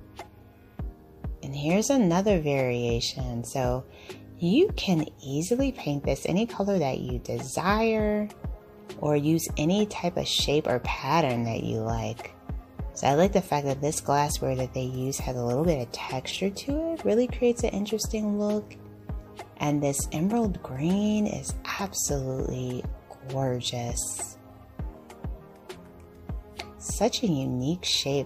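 No technical faults can be heard anywhere in the clip.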